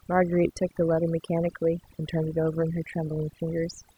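Overdone noise removal runs throughout this speech clip: a noise reducer set too strong cuts bands near its noise estimate, leaving twinkling near-silence.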